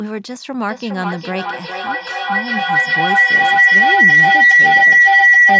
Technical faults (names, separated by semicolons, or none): feedback howl